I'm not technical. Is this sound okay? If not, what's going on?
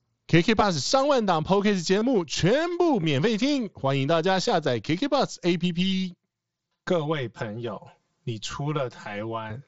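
No, there are two problems.

Concealed Bluetooth headset packet loss happens at 1.99 to 2.02 s, at 3.03 s and at 8.52 s. Small chunks of sound travelling from the headset to the phone went missing, and the phone filled each gap by repeating a short stretch of the sound just before it. The gaps are tiny, about 22, 8 and 15 ms, which fits roughly three, one and two lost packets. You may hear only a faint buzzy blip or a slight wobble.

Channel delay (comb filtering) runs from about 5.6 s to 9.5 s. One side of the recording arrives about 5 ms late, and when the two sides are mixed together, some pitches cancel out at regular steps, starting around 100 Hz. That makes this stretch sound hollow and phasey, a bit like talking through a tube. This is separate from the headset's normal wideband Bluetooth sound, which gives the whole clip its slightly grainy, limited top end.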